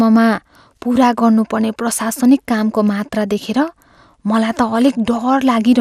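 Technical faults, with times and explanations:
Throughout, MP2 compression: the speech sounds dull, with a gurgling, granular roughness that is plainly audible across the clip and nothing above about 15.1 kHz. This is likely a low-rate MPEG Layer II encode, in keeping with roughly 80 kbps. The codec divides the signal into 32 equal sub-bands and rations bits among them. When bits run short, upper bands are dropped entirely, while the rest are quantised coarsely enough to leave that grainy texture.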